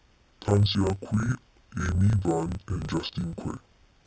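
Throughout, interleaved audio is read as planar in 30 ms blocks, so each half-block plays at half speed: speech sits an octave low, doubled and choppy at 33.3 Hz.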